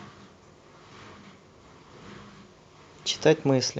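No technical faults can be heard in the signal, which arrives by way of a call codec with the band-limited top end typical of that path.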